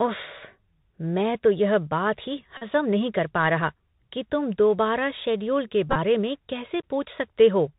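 Bluetooth CVSD headset codec throughout: the speech is squeezed into a band below 4 kHz, with a 1-bit adaptive step that fits 64 kbps CVSD, leaving granular hiss and scratchy s sounds. Bluetooth headset packet repeated from 2.57 to 2.63 s: lost packets were replaced by re-decoding the previous one, and the repeat every 3.75 ms makes a steady buzz near 267 Hz. The same fault returns from 5.90 to 5.97 s, with about 41 ms lost in breaks scattered over 60 ms and a longest run of roughly 20 ms, giving shorter bursts of buzz.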